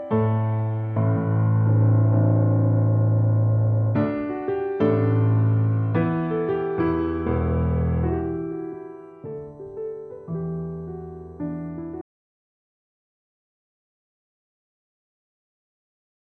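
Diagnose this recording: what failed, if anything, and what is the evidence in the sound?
An audio dropout to silence starts at 12.01 s and runs to the end. The sound cuts off mid-flow into silence with no room tone. The waveform goes flat and the spectrogram blank. The input device or link likely dropped while recording continued.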